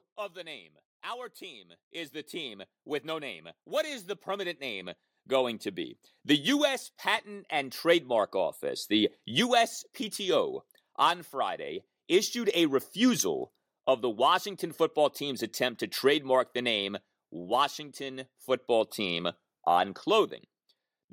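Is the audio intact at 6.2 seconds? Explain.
No, not quite. At 6.2 seconds you're in the middle of an automatic gain rise that runs from about 0.14 s to 8.91 s. The gain control decided the input was too quiet and kept nudging its gain up, by about 15 dB over that stretch. Since it scales everything together, the speech and the background noise swell in lockstep, so the level is still climbing at that point.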